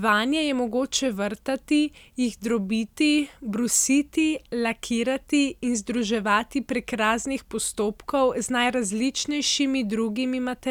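No technical faults can be heard anywhere in the recording. With nothing to point to, there are no times or values to give.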